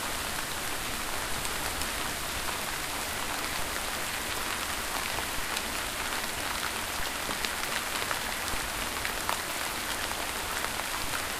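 The waveform's zero line jumps by about −26 dBFS at 3.59 s and 5.39 s and about −27 dBFS at 11.04 s, three DC steps that a 5 Hz high-pass then bleeds away over a few tens of milliseconds. Each is heard as a low thump under the unchanged sound.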